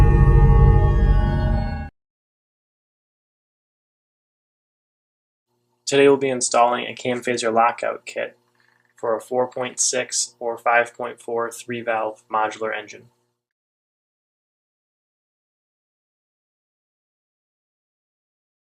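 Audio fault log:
8.90 s, corrupt frame decoded: a very faint blip, far down in level, over in a few milliseconds. It seems to span several short frames whose compressed bits were damaged. The decoder still played them, and the misread gains and codes put stray energy at the wrong frequencies.
12.55–12.58 s, corrupt frame decoded: a clearer chirp-like burst, much louder than the first but still quiet. It points to a single damaged frame played as received, with its energy spread into the wrong parts of the spectrum for about that frame's length.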